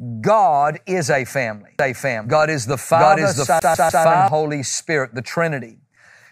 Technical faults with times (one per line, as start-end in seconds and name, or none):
1.79-4.28 doubled audio track
3.59-4.04 CD stuck on one turn